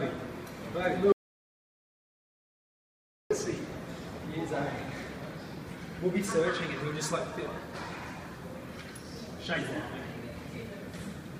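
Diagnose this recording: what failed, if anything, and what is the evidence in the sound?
An audio dropout to silence runs from 1.12 s to 3.31 s. The sound stops abruptly and resumes mid-flow after about 2.18 s of silence with no room tone. The likely cause is a lost input at the device or link stage, with the recorder writing silence.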